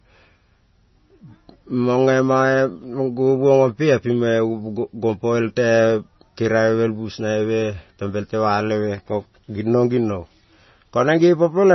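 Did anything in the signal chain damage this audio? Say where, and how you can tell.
Yes: likely MP3 compression at the codec stage, starved of bits, fitting roughly 24 kbps. Nothing above 5.9 kHz survives throughout, leaving heavy watery, swirling speech with smeared attacks.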